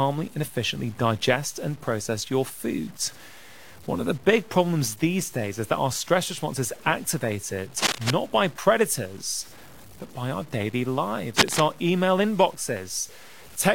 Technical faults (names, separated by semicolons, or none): low bit depth without dither; cable scratch noise